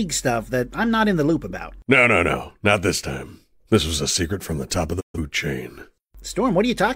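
Speech clip with a digital broadcast dropout from 4.99 to 5.19 s: the audio fades out over about 20 ms and mutes, a hole that fits roughly three failed frames.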